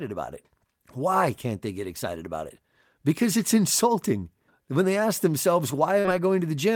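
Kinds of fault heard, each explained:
Short concealed packet loss: about 40 ms of the speech failed to reach the decoder in time, and the receiver covered the hole by extending the preceding sound (pitched if voiced, shaped noise if not) before blending back into the real signal around 6.00 to 6.05 s. It shows as a brief smear rather than silence, which separates it from an unconcealed dropout, where the audio would simply cut out for that instant.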